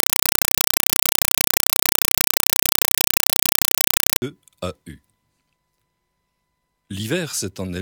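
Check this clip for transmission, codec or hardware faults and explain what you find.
One fault, right at the start. From 0.0 to 4.22 s there's a compressed stream played as audio: an AC-3 bitstream got passed through as raw samples, so each frame becomes a 4 ms noise burst plus padding, 31.25 times a second. The result is loud chattering static.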